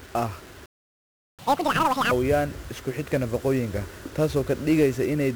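From start to finish the speech carries heavy 1-bit DFPWM compression. Each sample is reduced to a single up-or-down step of an adaptive level, so the quantisation error becomes a dense, broadband fuzz that sits on every syllable, with crackle on transients and the treble dulled or replaced by hiss. The density of the fuzz fits a rate around 48 kbps. Unlike ordinary transform-codec artefacts, there is no swirling or warbling, just a constant gritty noise bed riding the signal.

At 0.65 s the speech stops mid-flow and the output goes silent until 1.39 s, a playback stall of about 720 ms. The likely cause is the player running short of data, or its thread being held up, before output resumed.

From 1.39 s to 2.11 s comes catch-up at higher speed. The speech runs at double rate and its pitch jumps by about 10 semitones, giving a chipmunk quality, before snapping back to normal. Because speed and pitch rise together, this is resampling-based catch-up rather than time-stretching, which would keep pitch steady. 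Its placement right after the silence marks it as the player recovering the backlog.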